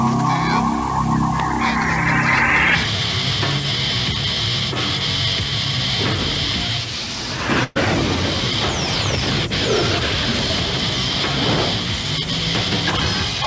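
At 7.64 s a burst of packet loss removes about 120 ms of audio. The receiver fills the gap for about 116 ms by extending and fading the last sound into a held buzz or hiss, then resumes at 7.77 s with that stretch missing. The audio stops at 8 kHz, which fits the G.722 call codec.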